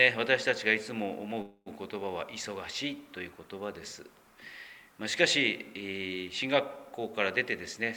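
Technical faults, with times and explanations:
1.41–1.68 s, call audio freeze: the sound stalls into a fading buzz for 248 ms, ending in 30 ms of silence, then resumes where it stopped with nothing lost. Likely cause: delayed packets emptied the jitter buffer, so the receiver extended the last sound until they arrived.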